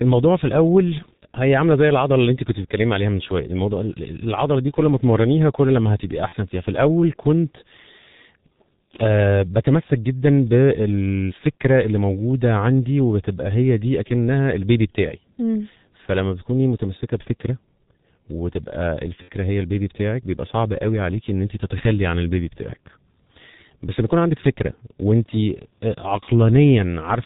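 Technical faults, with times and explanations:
Throughout: G.723.1 codec. The whole recording is dull and muffled, with nothing above 4 kHz. Voices sound hoarse and grainy. Consonants smear together and lose their edges. The damage is heavy and fits the low 6.3 kbit/s mode. The codec sends only a compact model of the voice, one 30 ms frame at a time. Fine detail between updates is discarded. The decoder rebuilds an approximation, so texture and crispness are lost.
6.29–6.35 s and 19.22–19.31 s: VoIP packet loss concealed by the speech codec. At each point the sound briefly turns buzzy and smeared, then fades before recovering. The first gap is short and fits one lost 30 ms frame. The second lasts longer and fits about 60 ms of missing audio. The decoder filled each hole by repeating its last pitch and filter with falling gain. Each frame builds on the previous one, so the sound stays weak just past each gap.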